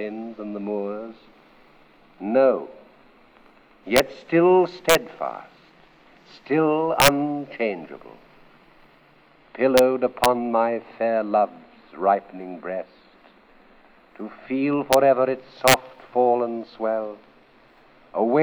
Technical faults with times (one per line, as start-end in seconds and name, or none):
3.96-3.99 integer overflow
4.89-4.95 integer overflow
7.00-7.08 integer overflow
9.78 integer overflow
10.24 integer overflow
14.93 integer overflow
15.68-15.74 integer overflow